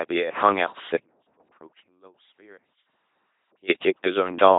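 From the start, the speech has the buzzy, robotic timbre of an LPC-10 vocoder at 2.4 kbit/s. A spectrogram shows smeared formants, a rigid pitch comb, and nothing above 3.8 kHz.

From 0.95 s to 3.68 s, an audio dropout to a faint residue leaves only a trace some 25 dB down, likely from a broken feed. The waveform collapses abruptly to a thin band.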